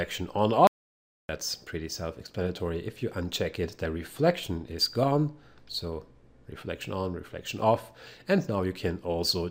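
An audio dropout to silence runs from 0.67 s to 1.29 s, removing about 0.62 s of the recording. The sound stops abruptly mid-flow and resumes just as suddenly, and the gap between is silent, with no room tone or background hiss at all. That total absence points to a likely cause: the input was briefly lost, through a disconnect, link failure or accidental mute, while the recorder kept writing silence. Whatever occurred during that stretch is unrecoverable.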